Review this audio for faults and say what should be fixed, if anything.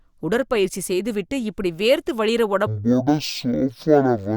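From 2.67 s to the end of the clip, right after "செய்துவிட்டு இப்படி வேர்த்து வழியிற", the speech drops to half speed and an octave low, 12 semitones down. This is stereo read as mono: interleaved left and right samples are played back-to-back as one channel, which also adds a fainter mirrored image in the upper half of the spectrum. To prevent it, read the channel count from the stream header and deinterleave stereo frames before treating the data as mono.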